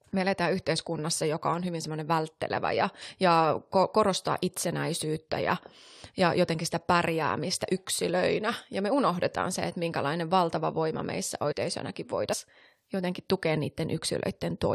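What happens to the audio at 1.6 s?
Nothing goes wrong at 1.6 s: the speech continues intact through that moment, with no dropout, click or distortion.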